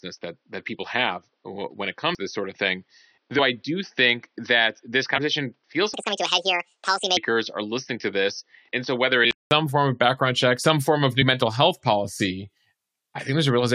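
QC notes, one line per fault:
0.00–9.51 s, input switched to a poorer device: the sound is dull and boxy, a little quieter than what follows, and carrying faint added noise well below the signal. At 9.51 s a short gap of 200 ms precedes a clearer, fuller tone. This is likely a change of input device, from a narrow-band microphone or headset call profile to the normal one, each with its own bandwidth, level and noise.
2.15–2.17 s, 5.14–5.19 s and 11.21–11.23 s, compressed frames skipped: at each join the audio lurches forward, dropping about 70 ms, about 70 ms and about 50 ms of material respectively. Whole compressed frames were left out, either missing or rejected as damaged by the decoder, so playback jumps by a multiple of the frame length.
5.94–7.17 s, section at the wrong speed: the speech suddenly turns high and hurried, running 1.58 times too fast and sitting about seven semitones above its natural pitch, then drops back to normal at 7.17 s. 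Speed and pitch move together because the stretch is simply replayed faster, likely through being fitted to the wrong clock during editing or playback.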